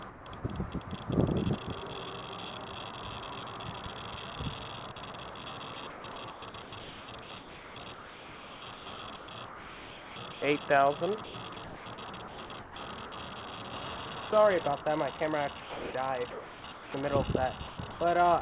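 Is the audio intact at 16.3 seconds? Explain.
No, 16.3 s falls inside a stretch from 15.6 to 16.94 s where the sound gets choppy and about 0.9 s of it is swapped for synthetic hiss. That's likely sound chopped by the voice detector, toggling transmission and filling the gaps with comfort noise.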